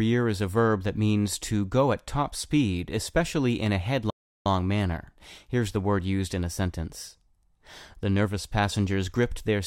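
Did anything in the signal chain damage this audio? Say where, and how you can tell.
Yes. At 4.10 s, right after "speed especially in a", the speech drops to silence for about 0.35 s and resumes at 4.46 s. That gap is a playback stall, likely the player's buffer running dry or its thread being blocked until output recovered.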